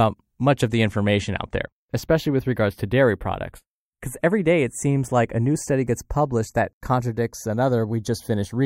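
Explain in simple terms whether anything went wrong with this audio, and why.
Something did go wrong, throughout the speech: the two channels are drifting apart. Each side was recorded on a device with its own clock, and the clocks disagree by a tiny amount, around twenty parts per million, so one side slowly falls behind until it lags by a fraction of a millisecond at the end. Heard together in mono, this makes a slow, swooshing flanging sound. A fixed delay between the channels would colour the sound in one unchanging way. Here the colouring keeps sliding because the gap keeps growing.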